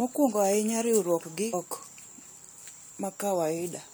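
At about 1.52 s there's a brief burst of damaged data in a compressed stream, and it cuts through the speech as a quick glitch. What's going on is that a short stretch of the encoded data got corrupted, so the decoder couldn't make sense of the frames it was handed. It lost its footing, spat out garbage for a moment, and then hunted for the next valid frame header before playback settled back in.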